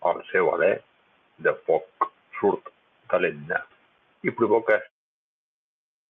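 No technical faults are audible.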